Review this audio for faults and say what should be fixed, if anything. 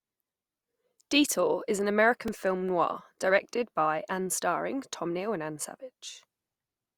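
There's one repeated buffer at about 2.28 s, just before "film noir directed." The playback device didn't get fresh audio in time, so it replayed its last chunk twice more, giving the same sliver three times back to back with hard joins. Each chunk is only about 2.67 ms, which fits a 128-sample buffer, so it comes across as a quick click or tiny buzz rather than a stutter, and essentially no audio goes missing. To prevent it, give the playback path a bit more buffer headroom.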